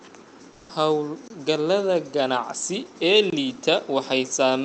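From about 0.51 to 0.69 s, the real room tone drops out for roughly 180 ms and is replaced by comfort noise: a flat, featureless hiss about 4 dB quieter than the background it covers. That background already sits low, about 28 dB under the loudest speech. It's likely the codec's discontinuous transmission. The sender stops sending audio once it decides nobody's talking, and the receiver fills the hole with synthetic noise shaped roughly like what was there, so the detail vanishes until speech returns.

Then there are two gaps between chunks, at 1.28 s and at 3.30 s, the second right after "ganacsi ee". Each is a hole of about 23 ms, and they land 2 s apart, which matches audio delivered in 2-second blocks with a little dead air left at each join. Nothing is actually missing from the content, but the flow gets clipped at those seams. All of this sits on top of the call codec's top end, which stops around 8 kHz.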